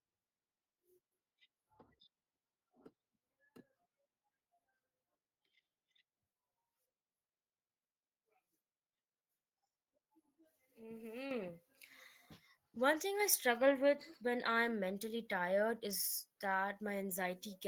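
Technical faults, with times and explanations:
11.31 s and 13.2 s, microphone volume stepped up: the level jumps upward in a single instant, by about 7 dB at 11.31 s and then by about 3 dB at 13.2 s, just before "I struggle with when". Each time the input volume on the device was raised in one step, so the speech and the background noise get louder together and stay there. That shared, sudden and lasting rise is what sets it apart from a speaker moving closer, which would change the voice alone and more gradually.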